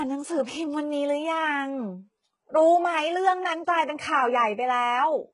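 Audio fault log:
throughout, HE-AAC compression: the speech sounds bright yet brittle, with s sounds turned gritty and lispy and nothing above 11 kHz. The likely cause is heavy HE-AAC coding at a rate that fits about 12 kbps, with lower bands copied upward to stand in for the real treble.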